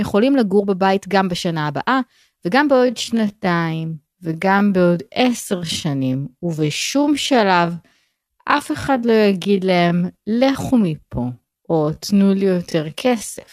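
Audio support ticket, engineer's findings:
Time-stretched section, 2.71 s to end of clip. Speech abruptly slows to about 0.6x pace, pitch unchanged. Syllables dragged out. Likely cause: stretch algorithm in the edit/render stage lengthening audio to fill a slot, repeating short segments to hold pitch. Spectrogram: harmonics stay at the same frequencies but formant transitions and onsets widen. Waveform: envelopes visibly elongated after 2.71 s.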